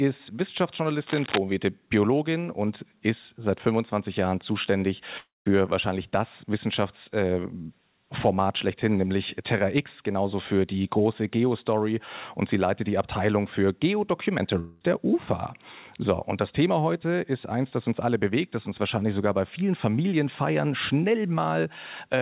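Cable scratch noise at 1.06 to 1.38 s lays a dense, uneven burst of scratching over the sound, nearly as loud as the signal itself. This is likely a worn cable, connector or control being moved, so that its contact resistance jumps about rapidly and injects ragged noise for about a third of a second.

Long network dropout at 5.18 to 5.48 s removes about 0.28 s of audio. The receiver stretches the last sound into a fading buzz or hiss, which decays to near-silence for the final part of the gap before the sound resumes further on, with the missing stretch simply gone. This is likely packets failing to arrive. A second long network dropout at 14.60 to 14.83 s loses about 0.22 s. Here the concealment fill covers the whole gap, so no silence is heard before playback resumes. The call path itself has nothing above 4 kHz, which fits G.711 A-law at 64 kbps.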